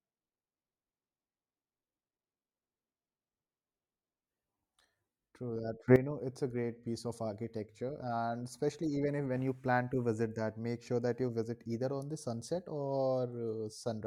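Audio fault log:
5.88 to 5.96 s, sudden gain jump: speech and background noise rise together by about 13 dB, likely from a gain change applied abruptly without any ramp.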